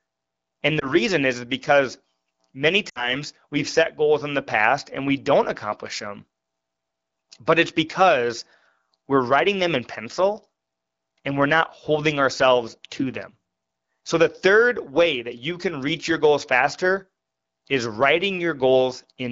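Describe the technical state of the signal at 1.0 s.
Lost AMR speech frames, from 0.79 to 0.95 s, just before "is because many". A single 20 ms speech frame failed its radio checksum, so the AMR-WB decoder filled the gap by reusing the last good pitch and vocal-tract parameters at falling gain. This is heard as a brief dip or warble in the speech. The voice then returns weak or rough for a moment before settling back into the clear 12.65 kbit/s wideband sound.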